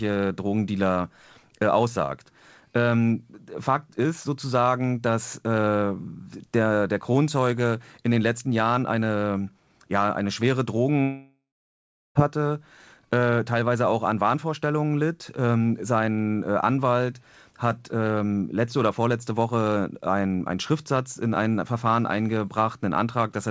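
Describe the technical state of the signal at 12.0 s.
At 12.0 s the signal sits inside a long network dropout, 11.02 to 12.17 s, after "eine ja eine schwere". Packets likely stopped arriving, so the receiver stretched the last sound into a fading buzz, then about 0.7 s of near-silence, before audio resumes at "hatte äh teilweise auch" with roughly 1.1 s lost.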